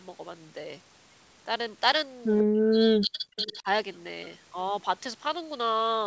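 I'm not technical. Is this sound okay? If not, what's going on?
No. Two related problems show up in the middle of this speech clip.

The first is an echo leak. The other side of the call was likely on a loudspeaker, and its echo canceller didn't fully remove what its microphone picked back up, so a delayed copy of the voice was sent back. You hear ghostly scraps, quieter than the speech, from 2.39 to 2.43 s, trailing about a tenth of a second behind, and again from 3.37 to 3.58 s, trailing by nearly a third of a second.

The second is speech suppressed in double talk. Both sides were likely talking at once, and the echo canceller couldn't tell the real talker from the echo, so it turned everything down. From 2.44 to 3.38 s the voice drops away sharply for about a second, nearly to silence at its worst. It dips again, more mildly, from 3.59 to 3.67 s.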